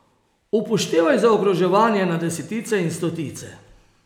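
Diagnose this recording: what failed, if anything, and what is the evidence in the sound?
Clock drift buffer slips in the buffer stage: clicks every 1.01 s, 0.32 to 3.37 s, likely unsynced clocks slipping samples; thin vertical spectrogram lines.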